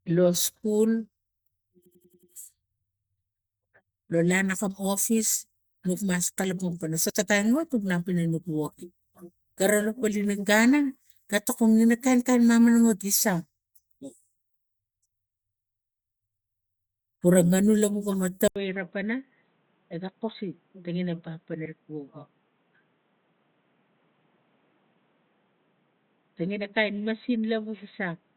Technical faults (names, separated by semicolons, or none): system hang loop; compressed frames skipped; input switched to a poorer device